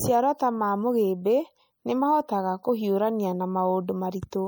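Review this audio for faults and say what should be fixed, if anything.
Throughout the clip the speech carries plainly audible MP3 compression damage. The sound is watery and swirly, with metallic chirping on s sounds and smeared attacks. This is likely the result of an MP3 encode with too few bits, which fits a 64 kbps setting: the encoder discards weak frequency components, and they flicker in and out from one frame to the next. To prevent it, keep a lossless master and encode at a higher bitrate.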